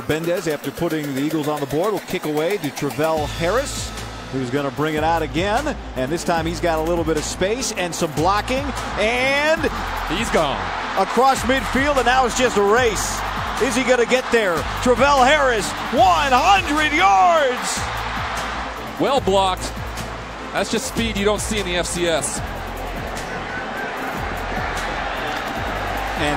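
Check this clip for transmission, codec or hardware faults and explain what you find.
Nothing in the audio points to any transmission, codec or hardware trouble, so there's nothing here to flag.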